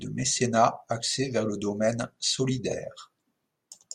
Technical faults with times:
1.13 repeated buffer

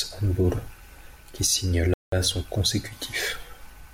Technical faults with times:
1.94-2.12 playback stall

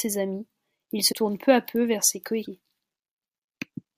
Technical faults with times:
1.11-1.14 broken MP3 bit reservoir
2.44-2.47 broken MP3 bit reservoir

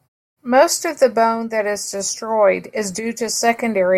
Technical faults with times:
none

